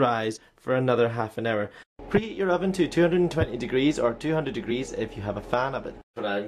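Compressed frames skipped at 0.35–0.38 s, 2.17 s and 4.70 s: frames the decoder never played leave forward jumps of roughly 50 ms, then 20 ms twice, suggesting two frames and then one. Each join sounds as a brief blip or click.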